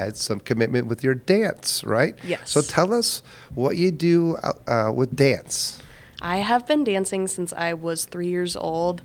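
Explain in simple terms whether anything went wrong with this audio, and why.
Nothing went wrong here: the signal stays steady and intact throughout, with no audible technical problem anywhere in the recording.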